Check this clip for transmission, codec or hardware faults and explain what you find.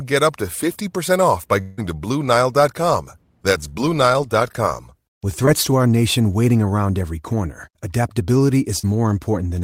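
There are three network faults here: one longer gap and two quick concealed losses.

From 1.61 to 1.79 s, right after "off by", there's what sounds like a long network dropout. About 160 ms of audio goes missing, and the receiver papers over the whole stretch by extending the last sound into a fading buzz or hiss rather than going silent. When the audio picks back up, that chunk is simply gone. The likely cause is packets arriving too late or not at all over that stretch.

The other two are short concealed packet loss. At 5.45 to 5.49 s, just before "to our nation waiting", roughly 20 ms never reached the decoder. The receiver patches the hole with about 14 ms of extrapolated sound and blends back in, giving a tiny smear or wobble. At 8.79 to 8.85 s, after "around every corner adaptability", about 40 ms is lost and filled in the same way, so you hear a brief wobble.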